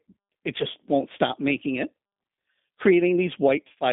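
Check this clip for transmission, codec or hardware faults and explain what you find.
Two faults are present: G.729 codec coloring across the whole speech clip, and two stretches of VoIP packet loss concealed by the speech codec.

G.729 codec, throughout: the speech is band-limited to roughly 200 Hz to 3.6 kHz and sounds plainly rough and synthetic. The encoder models each 10 ms frame with a vocal tract filter, a pitch predictor and a few pulses, which fits an 8 kbit/s G.729A link. On a spectrogram there is a hard ceiling near 3.6 kHz with smeared, grainy harmonics below it.

VoIP packet loss concealed by the speech codec, at 0.58 to 0.64 s, just before "won't stop making it": about 20 ms of audio is missing, consistent with two lost frames. The decoder repeats its last pitch and filter at falling gain, giving a short buzzy smear. The waveform shows a brief, regular, decaying stretch, and the spectrogram shows flat, repeated harmonics.

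Packet loss concealed by the speech codec, at 3.67 to 3.80 s: losses totalling about 90 ms are scattered over 130 ms, with the longest gap 40 ms. Concealment repeatedly extrapolates and fades, so the sound turns buzzy and weak. The waveform shows dips and repetitive cycles, and the spectrogram shows blurred, frozen harmonic stripes.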